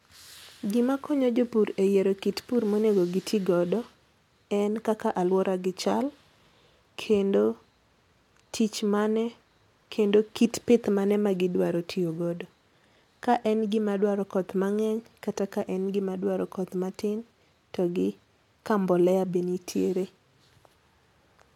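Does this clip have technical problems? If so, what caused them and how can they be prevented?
No, nothing stood out as a technical problem on listening, so there is no cause to trace and nothing to prevent.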